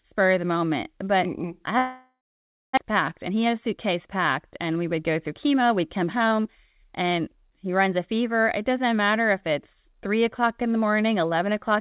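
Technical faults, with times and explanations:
1.78 to 2.79 s, long network dropout: The likely cause is packets that stopped arriving for about a second. The receiver stretched the last sound into a fading buzz, then left about 0.55 s of silence, and roughly 0.6 s of the speech never returned.
2.88 to 8.06 s, jitter buffer speed-up: The late audio arrived in a bunch, so the buffer held roughly 0.4 s more than it aims for. The receiver trimmed small pitch-period slices again and again, and the speech runs about 7% fast at unchanged pitch, sounding slightly rushed.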